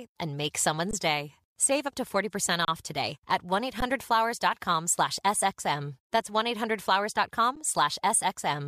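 The audio has four brief dropouts of the underrun-with-held-sample type, at 0.91–0.93 s, 2.65–2.68 s, 3.81 s and 7.56 s, each lasting 10 to 30 ms. Each time the output buffer ran dry, the converter froze on its last sample, so the waveform flatlines and the sound halts abruptly without a sharp click. No audio is skipped, so playback resumes where it stopped and each return is fairly soft.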